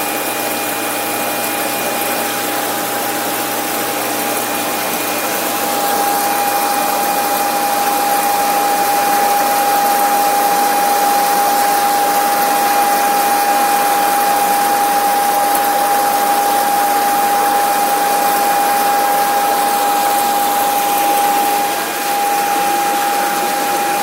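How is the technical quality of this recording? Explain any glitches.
No glitches or faults audible.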